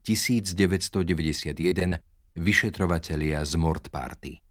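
From 1.61 to 1.93 s, repeated packet loss leaves four holes, the longest 31 ms, patched by extending prior sound, so the speech turns choppy, with pieces missing. At 2.33 to 2.36 s, a short concealed packet loss drops about 20 ms; the filled gap is heard as a brief smear.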